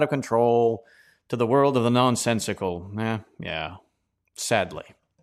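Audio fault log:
No audible faults found in this speech recording.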